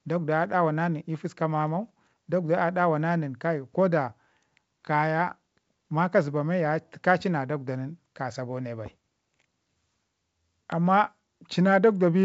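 Speech over G.722 wideband telephone coding at 64 kbit/s, with no technical faults to report.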